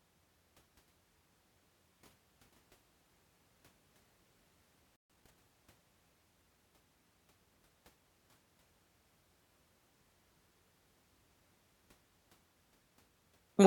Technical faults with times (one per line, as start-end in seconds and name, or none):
4.96-5.10 playback stall
5.10-5.36 time-compressed catch-up